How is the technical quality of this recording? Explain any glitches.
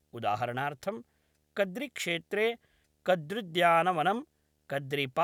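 The speech has a faint video or display buzz running underneath it from start to finish. It is a low 75 Hz buzz with a fine hash above it, sitting well below the speech. It comes from a screen or video cable leaking its field-rate signal into the audio wiring.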